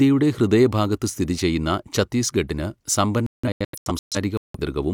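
Digital broadcast dropout from 3.26 to 4.59 s in this speech clip: the receiver lost lock or rejected corrupted frames and muted, leaving several short holes totalling 725 ms across 1.28 s, the longest 171 ms, which fits roughly seventeen discarded frames.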